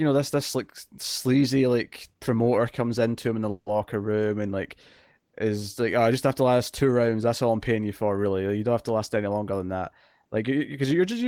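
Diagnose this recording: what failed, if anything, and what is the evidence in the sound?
Around 3.51 to 3.78 s there's a call audio freeze: the last bit of speech smears into a fading buzz for about 150 ms, then picks up where it left off with nothing lost. That's likely network delay starving the jitter buffer.

The jitter buffer speed-up comes later, from 8.95 to 9.83 s at about 110% speed, and again from 10.25 to 10.85 s at about 108%. Pitch holds but the speech sounds hurried as the receiver trims pitch-period slices to shed backlog, roughly a tenth of a second and then half that.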